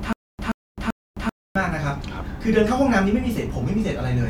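From the very start of the clip until about 1.55 s, the speech has a stutter with silent gaps, already under way as the audio begins. A fragment of about 127 ms plays, then about 262 ms of dead digital silence follows, and the cycle repeats every 389 ms, three times over. The likely cause is a stalled player or stream re-serving its last buffered piece at each retry, so the audio meant for those gaps never arrives.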